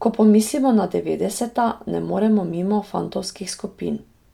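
Speech with generation loss throughout. It sounds swirly and hollow, with blurred attacks. That likely comes from about three MP3 passes, fitting 128 kbit/s.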